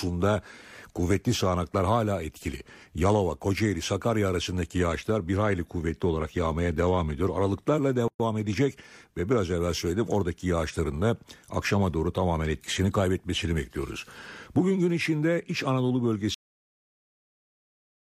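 A gap at a join of encoded pieces opens in the speech from 8.08 to 8.20 s, about 118 ms, just before "edecek ve biraz evvel". The recording appears to have been encoded in separate pieces and spliced without trimming, so the encoder's start-up delay and the padding of the previous piece's final frame both remain, leaving a short hole in otherwise continuous speech before the talker picks up exactly where they left off. A cut-off end follows at 16.34 s: the speech is interrupted mid-sound and drops straight to digital silence with no natural decay, and that silence runs to the end of the clip. This points to the final buffers never being written out or played, so the tail of the recording was simply lost rather than faded or completed.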